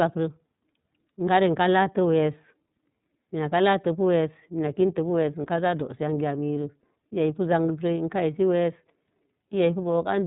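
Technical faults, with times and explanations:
Throughout, iLBC codec: the speech has passed through a narrowband VoIP coder, which fits its 30 ms frame mode at roughly 13 kbps. Each frame's excitation is coded on its own and nothing above 4 kHz survives, so the speech is dull, rough and a little synthetic.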